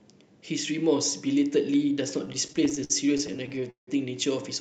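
Speech that drags and stutters from 2.25 s to 3.89 s: the sound keeps catching and holding, with many short hitches up to 172 ms long that add about 0.4 s and fill roughly a quarter of that stretch. These are repeated stalls (stutter). Packets arrived late, so the jitter buffer kept running dry and the receiver stretched the last sound to fill each wait. Nothing is lost, only delayed. The audio went through a WebRTC call path, and its 8 kHz bandwidth fits Opus at around 64 kbps.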